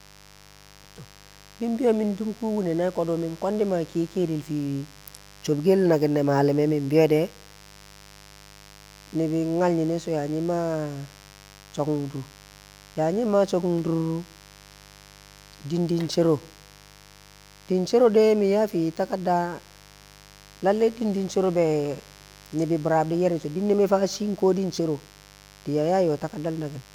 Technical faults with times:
0.00-26.94 mains buzz

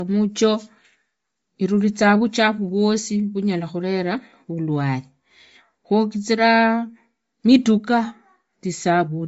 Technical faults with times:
0.00-9.27 Bluetooth LC3 compression

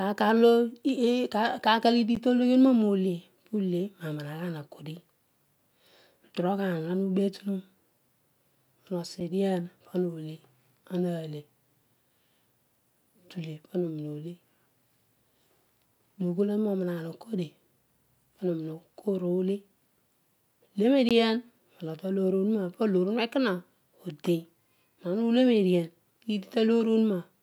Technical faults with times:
2.15 block of digital silence
9.20 block of digital silence
21.09 block of digital silence

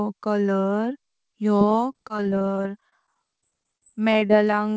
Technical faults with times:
1.60-4.53 repeated packet loss (robotic sound)

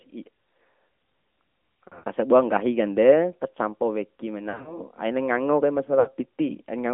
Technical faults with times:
0.00-6.94 AMR narrowband mobile codec
1.88-2.04 lost AMR speech frames
4.50-4.79 lost AMR speech frames
6.00-6.12 lost AMR speech frames

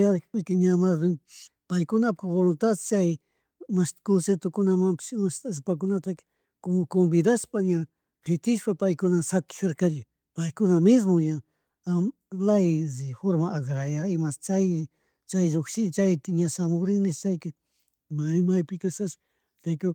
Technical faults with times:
none

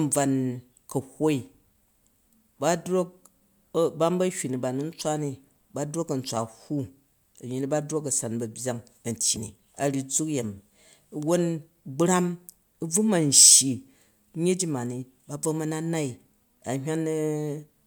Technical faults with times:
9.35-9.38 broken MP3 bit reservoir

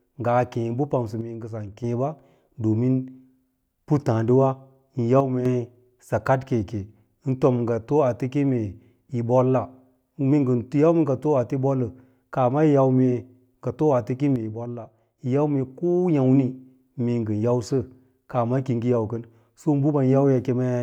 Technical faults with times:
1.21-1.84 one channel drops out
5.20-5.45 one channel drops out
14.36-15.18 one channel drops out

